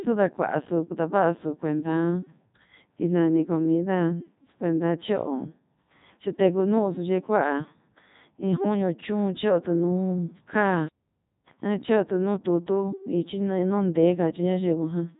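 Throughout, the speech sounds robotic and buzzy, with nothing above about 3.8 kHz and heavy damage overall. This is the Codec 2 vocoder at work, and the result fits its 3.2 kbit/s mode. It transmits only pitch, voicing, energy and a spectral envelope, and the decoder rebuilds the voice from sine waves rather than the original waveform.

From 10.88 to 11.47 s the sound cuts out mid-flow for about 0.59 s before carrying on. This is a playback stall, likely caused by the player running out of data or its thread being blocked until output resumed.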